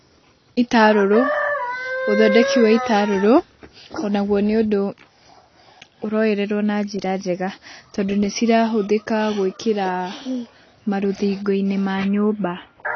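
Speech that sounds dull and smeared throughout, with nothing above about 6.5 kHz and a warbling, fizzy texture on sibilants and sustained sounds. This is likely AAC compression: an AAC-LC encoder starved of bits, consistent with roughly 24 kbps, that drops high frequencies and coarsely quantises what remains.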